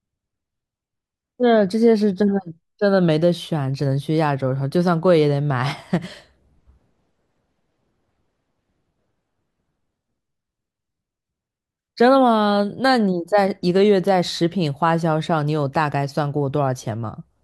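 No technical faults can be heard anywhere in the speech recording, with the signal holding steady from the first moment to the last.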